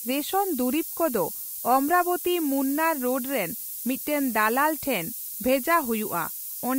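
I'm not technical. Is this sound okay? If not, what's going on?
No. A steady, thin hiss runs under the speech from the very start to the very end. This is low bit depth with noise shaping. The sound was stored with very few steps of loudness, which fits about 5 bits. The rounding errors were pushed up toward the highest pitches. So the hiss sounds bright and sharp rather than dull. It is strong, almost as loud as the speech itself.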